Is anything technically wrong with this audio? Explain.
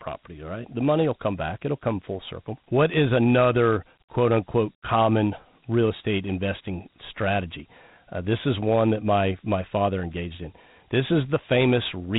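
Yes. The speech carries Dialogic VOX ADPCM coding from start to finish. Nothing is present above about 3.9 kHz, and the data rate of 32 kbps fits 4-bit samples at 8,000 per second. The codec stores each sample as a 4-bit step relative to an adaptive prediction, so the fine detail between steps is lost. The damage is plainly audible as a rough, gritty hiss that rides along with the speech over a band capped like a telephone line.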